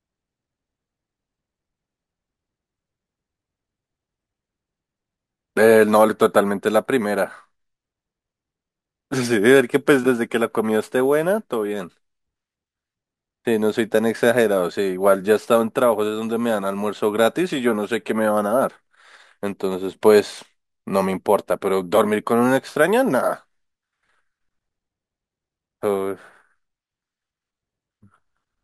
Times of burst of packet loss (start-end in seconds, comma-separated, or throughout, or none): none